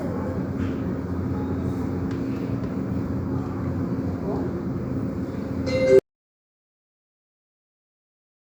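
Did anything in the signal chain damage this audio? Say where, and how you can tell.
Yes. There is an audio dropout to silence at the input stage. At 5.99 s the sound stops abruptly in mid-flow and never returns before the clip ends at 8.56 s. The gap is silent, with no room tone or noise floor left. That points to the recorder writing silence after losing its source, likely through a disconnected cable or device, a failed link or a stray mute. Whatever happened after 5.99 s is gone.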